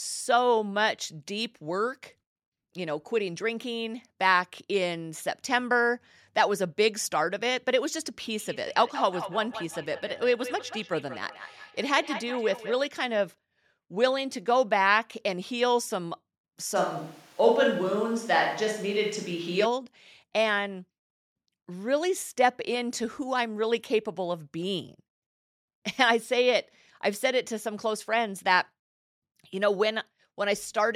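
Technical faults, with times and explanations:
8.38 to 12.92 s, feedback echo between two devices: The speech returns at a steady interval of roughly 200 ms, peaking about 12 dB below the direct sound. One device replays the other's audio into a microphone, and neither echo canceller removes it.
16.77 to 19.64 s, switch to a distant microphone: The speech turns suddenly roomy and hollow, with thinner bass, at much the same level, over room noise around 30 dB down. The close microphone was likely dropped for one further away, then restored abruptly.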